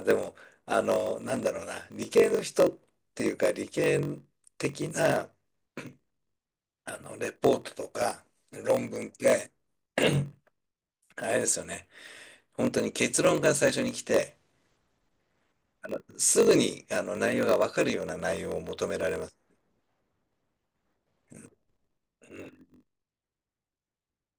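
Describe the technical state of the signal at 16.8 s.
At 16.8 s, as throughout the clip, a block size mismatch (padded) is present: one stage writes shorter blocks than the next reads, which fits 1024-sample reads, and zeros fill each remainder. The speech carries a 46.9 Hz buzz and runs at 0.938 speed, near normal pitch.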